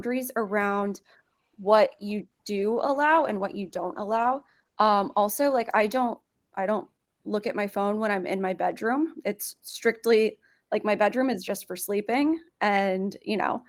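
From 0.69 s to 6.71 s there is a call bitrate drop: the encoder was starved of bits and coded the speech coarsely, so it turns rough, watery and dull, which fits a fall from about 40 kbps to 18 kbps. Unlike packet loss, nothing drops out. It clears before "look at my phone".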